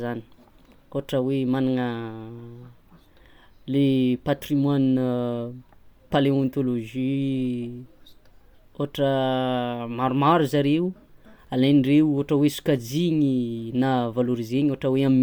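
From start to end, the speech carries plainly audible coding damage, likely from Bluetooth LC3 compression. The upper band sounds breathy and grainy, with detail swapped for noise. The smearing fits 10 ms frames at about 48 kbps. Nothing sits above 20.2 kHz.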